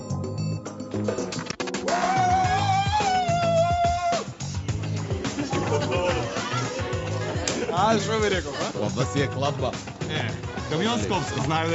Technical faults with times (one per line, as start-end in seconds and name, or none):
none